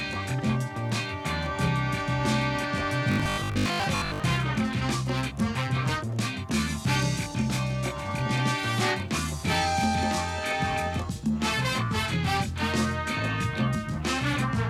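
From 3.12 to 4.24 s, robotic sound from repeated short buffers appears. A rigid 50 Hz buzz is imposed. Most of this stretch likely repeats 20 ms slices, skipping real audio.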